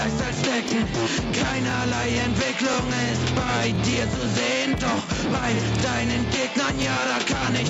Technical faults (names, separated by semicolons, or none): gain pumping; overlapping chunks